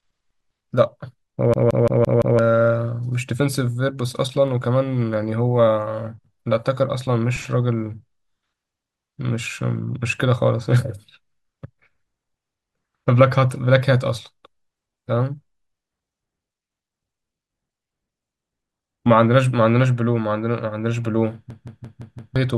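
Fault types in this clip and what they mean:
System hang loop: the playback side froze while the sound hardware kept replaying the same stretch of its ring buffer, so one chunk of speech about 171 ms long repeats exactly five times, a stutter at roughly 5.9 Hz. It happens twice, from 1.54 to 2.39 s and again from 21.50 to 22.36 s. That loop length fits an 8192-sample buffer, and each time around a second of the real speech is lost.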